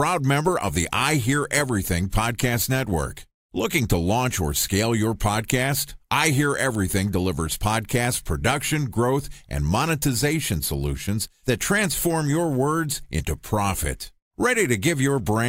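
The converter's sampling clock wanders throughout this speech recording, a case of sample clock jitter with timing errors of roughly a microsecond or two, so each sample lands slightly early or late at random. Because the resulting error scales with how steeply the waveform is changing, it shows up as a fine hiss or grit riding on the speech, sitting roughly 30 dB below the signal, strongest on loud and bright sounds and gone in the pauses.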